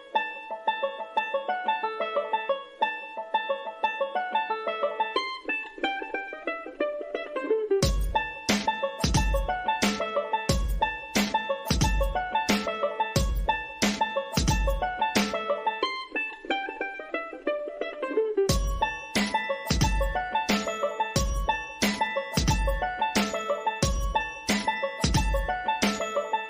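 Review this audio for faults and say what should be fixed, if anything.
No faults can be heard anywhere in the clip. Nothing needs fixing.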